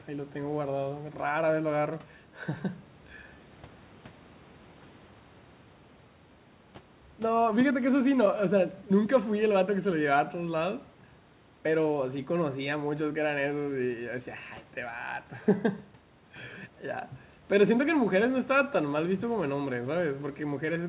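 No technical faults can be heard in this speech.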